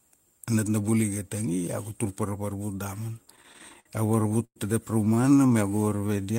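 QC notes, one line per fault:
3.25–4.57 s and 5.05–5.50 s: repeated stalls (stutter). The sound hitches and drags: 16 short holds in the first run (longest 111 ms, 315 ms in total, about a quarter of the span) and 9 briefer ones in the second (none over 18 ms). Packets arrived late, the jitter buffer kept running dry, and the receiver stretched the last sound each time, so nothing is lost but the flow stutters.
5.70 s to the end: jitter buffer slow-down. The final stretch plays at about 84% speed with unchanged pitch, sounds drawn out, and adds 116 ms. With its reserve running low, the buffer repeated single pitch periods and slivers of pauses over and over to rebuild it.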